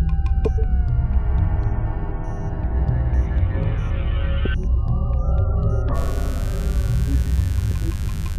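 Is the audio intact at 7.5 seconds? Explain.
No. From 5.93 s to 8.38 s, mains buzz leaks in as switching spikes twice per 50 Hz cycle, adding a steady, raspy buzz roughly 25 dB below the signal.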